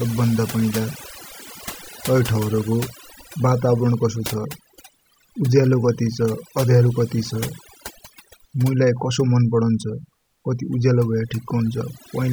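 Overdone noise removal runs throughout the speech. Bands near the noise estimate are cut hard, leaving near-silent gaps with twinkling specks.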